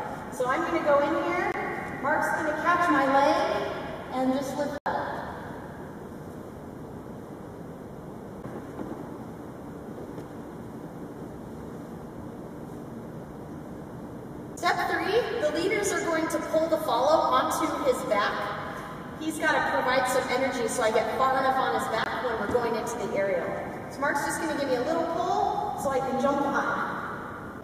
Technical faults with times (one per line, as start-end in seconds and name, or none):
1.52-1.54 block of digital silence
4.78-4.86 block of digital silence
22.04 block of digital silence